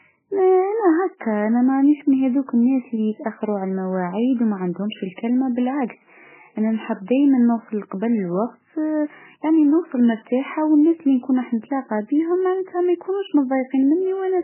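MP3 compression runs throughout the speech, with nothing above 3 kHz and heavy damage that fits a very low bitrate near 8 kbps. Starved of bits, the likely MP3 encoder cut the treble and dropped weak frequency lines, leaving a muffled, watery, swirling sound with smeared attacks.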